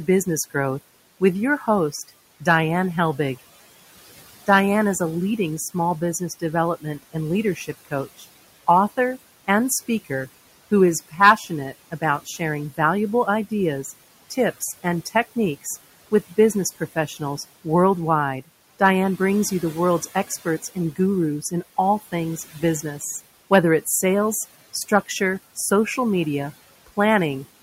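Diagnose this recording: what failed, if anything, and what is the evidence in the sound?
The call-processing stage is the culprit here, specifically the noise suppressor. Its artifacts run through the whole clip: the room noise, which sits about 19 dB under the speech, gets pulled down by about 16 dB in the gaps and then swells back up under each phrase. The suppressor is gating band by band, frame by frame, so the leftover noise breathes.

The same suppressor also bites into the speech itself, in four stretches: 5.74 to 8.25 s right after "is a leading", 11.11 to 12.79 s after "who is", 14.3 to 17.66 s, and 20.07 to 22.84 s after "brings you the world's". Within each stretch a few short bits, around 0.2 to 0.3 s in total, drop by about 13 to 17 dB. It misread quiet consonants and tails as noise, so they come out swallowed.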